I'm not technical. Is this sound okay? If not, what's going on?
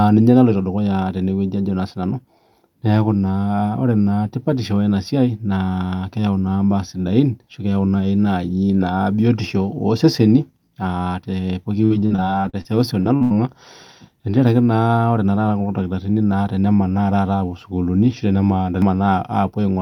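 No. From about 11.85 to 13.32 seconds there is repeated packet loss, which gives a robotic sound. Bits of the speech got lost in transit, gap after gap, the longest about 80 ms. Each gap was patched by stretching the previous sound, so it turns choppy.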